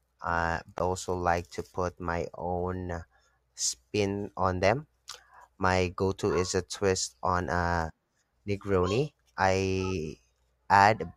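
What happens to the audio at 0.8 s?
At about 0.78 s there is a CD skip: the laser loses its track and jumps to another turn of the disc's spiral, so playback mutes for roughly 15 ms, ticks, then resumes elsewhere before "also like to". On a waveform it shows as a near-flat gap with an abrupt edge; a spectrogram shows a thin vertical click line.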